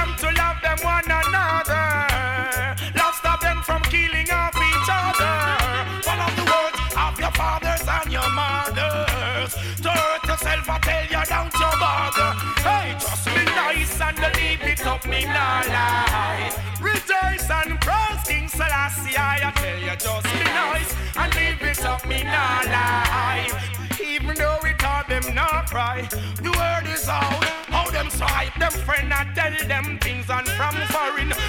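Nothing is technically wrong with this audio.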